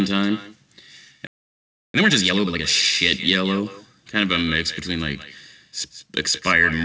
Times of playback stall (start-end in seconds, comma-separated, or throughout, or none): 1.27-1.94